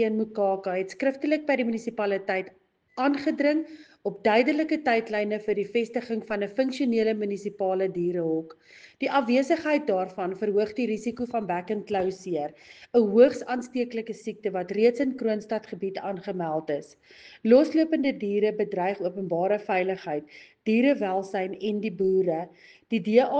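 Nothing stood out on listening; no point in the audio drew attention as a fault.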